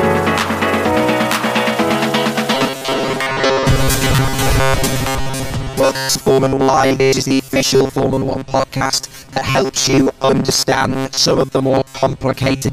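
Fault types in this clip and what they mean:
Robotic sound from repeated short buffers: from 2.55 s, most of the audio becomes a fixed metallic buzz near 134 Hz, likely from looping 7.5 ms slices, unlike irregular stutter.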